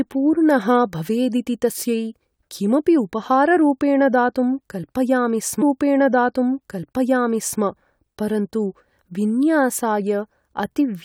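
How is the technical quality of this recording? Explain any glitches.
The recording has one clear glitch: a stream segment repeated. At 5.61 s, about 2.0 s of the speech plays a second time through 7.61 s, with a small blip at the jump back. The player fetched or queued that segment twice, so the programme restarts from an earlier point before continuing.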